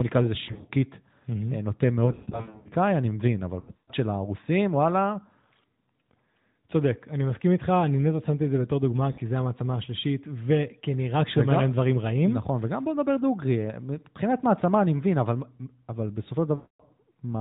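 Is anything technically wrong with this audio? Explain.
Yes. Lost AMR speech frames occur at 0.44–0.71 s, 2.06–2.69 s, 3.60–3.93 s, 9.12–9.21 s and 16.56–16.83 s. Radio errors corrupted speech frames so they failed their checksum, and the decoder filled each gap by repeating the last good pitch and vocal-tract settings at falling gain. Short scattered losses give brief dips and warbles. Longer runs, up to 120 ms in the 2.06–2.69 s stretch, smear the speech and let it fade before it returns rough, over narrowband AMR coding.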